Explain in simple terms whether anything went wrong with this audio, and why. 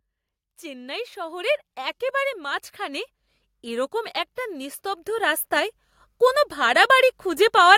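The speech and the background noise behind it swell louder together, slowly, from 0.42 to 3.09 seconds and again from 3.62 to 5.8 seconds. This is automatic gain rising: the recorder judged the input too quiet and gradually turned its own volume up.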